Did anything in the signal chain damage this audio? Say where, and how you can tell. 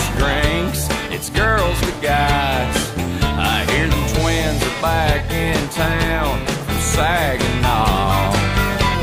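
No, nothing in the signal chain damaged this audio.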